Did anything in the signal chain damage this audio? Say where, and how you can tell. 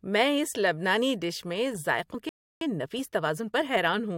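Yes. At 2.13 s the codec stage loses audio: compressed frames skipped. The sound jumps ahead by about 40 ms. That fits roughly two dropped 21.3 ms frames.

Shortly after, a playback stall cuts the sound off mid-flow from 2.29 to 2.61 s, a gap of about 320 ms. The likely cause is the player's buffer running dry or its output thread being blocked, leaving the device with nothing to play until it recovers.

From 2.61 to 3.89 s the player performs a time-compressed catch-up. The audio runs hurried at 1.25 times normal speed with its pitch unchanged, because small pieces are cut out and cross-faded to shrink the backlog built up during the stall.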